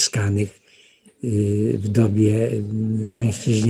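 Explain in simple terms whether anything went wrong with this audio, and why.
From 3.03 to 3.23 s the sound smears into a brief buzzy continuation for about 0.18 s, then picks up again with that stretch missing. This is a long network dropout: the audio likely stopped arriving, and the player stretched the last sound to fill the gap.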